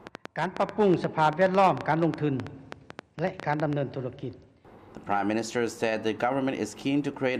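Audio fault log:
0.07–3.74 s, train of clicks: Something, likely interference from nearby equipment or a faulty connection, injects about 7.9 pulses per second at uneven spacing, around thirty in all. The result is an irregular ticking, with each pop rising roughly 10 dB above the sound beneath.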